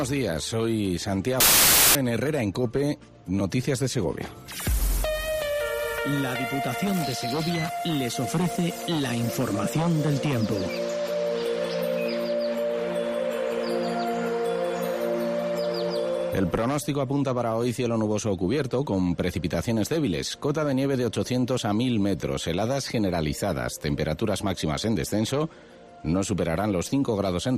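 From 1.40 to 1.95 s the sound collapses into loud, harsh broadband noise: samples built from the wrong bytes, where each value is assembled in the wrong order or alignment. The rapidly changing low bits then dominate.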